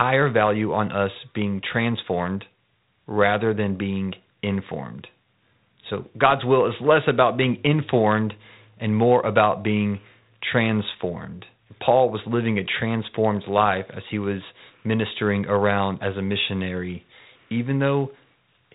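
Nothing here needs flagging, since the speech comes through without any technical faults worth pointing out.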